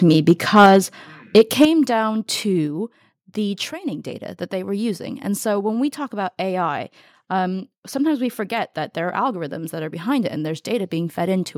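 Speech opens the clip, and its first two seconds carry two related faults. The first is microphone overload, heard from 0.11 to 0.76 s and again from 1.36 to 1.65 s. The loudest syllables turn harsh and crackly there. Peaks push about 7 dB past the converter's limit in the first burst and about 3 dB in the second, so a few percent of samples are flattened. The likely cause is an input volume set too high for the converter. The second fault is the microphone volume stepped down. At 0.66 s the level of voice and background drops abruptly by about 4 dB. At 1.65 s it drops again by about 8 dB. Each drop lands at or near the end of a distorted stretch. That points to call software likely reacting to the clipping by cutting the device's input volume in a single step.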